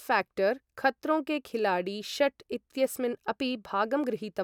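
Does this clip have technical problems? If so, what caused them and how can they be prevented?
No, this clip has no technical problems, so there is nothing to prevent.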